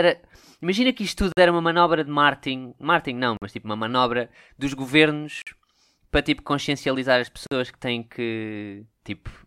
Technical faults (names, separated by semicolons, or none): gap between chunks